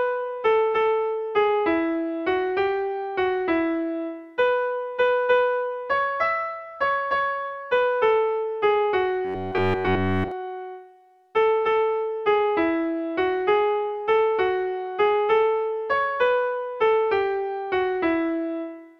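Between 9.25 and 10.32 s the audio turns into a rigid, metallic buzz near 93.8 Hz: robotic sound from repeated short buffers, likely a segment of about 10.7 ms looped throughout.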